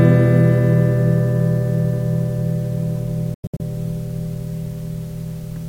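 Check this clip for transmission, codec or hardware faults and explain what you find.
One fault. A digital broadcast dropout hits from 3.34 to 3.60 s. The receiver muted bad frames, leaving several silent holes, about 192 ms in total, the longest 96 ms. Each mute fades in 3 ms. What was sent there is gone.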